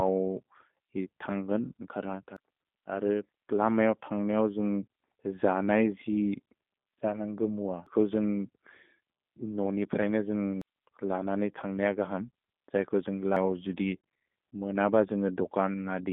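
Throughout, the speech sounds slightly rough and synthetic, with plainly audible coding damage and nothing above 3.8 kHz; the line band sits at roughly 200 Hz to 3.6 kHz. This is the G.729 codec, here the G.729A variant, which rebuilds speech from a filter, pitch predictor and sparse pulses.

At 2.37 s, 7.87 s, 10.62 s (between "नोनि प्रए न" and "लन नि") and 13.37 s (just after "जय्गो जुन्ग्"), the speech jumps forward with no gap, skipping roughly a third of a second each time. This is audio missing between chunks, likely lost as a chunked recorder handed over from one block to the next.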